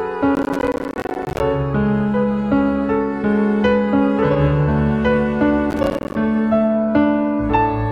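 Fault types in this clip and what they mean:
processor overload crackle: missed processing deadlines leave silent gaps, buffers of roughly 10 ms, giving gritty crackle around 0.35–1.4 s and 5.7–6.15 s, seen as waveform dropouts with vertical spectrogram streaks.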